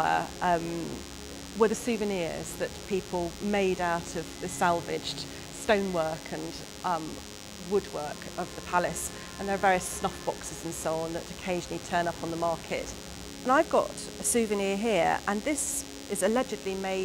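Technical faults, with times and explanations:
Throughout, DECT cordless phone buzz: a thin, steady buzz sits roughly 15 dB below the sound for the whole clip. A nearby DECT handset or base station transmits a short radio burst every 10 ms, and the audio circuitry rectifies these bursts into a 100 Hz pulse train. On a spectrogram this appears as evenly spaced horizontal lines at 100 Hz and its many harmonics, reaching well up the spectrum. The waveform shows a fine, regular ripple repeating every 10 ms.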